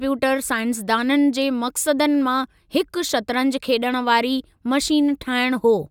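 No technical faults can be heard anywhere in the speech.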